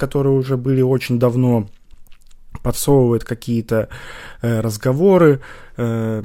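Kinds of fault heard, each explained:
Nothing stood out on listening to the speech here.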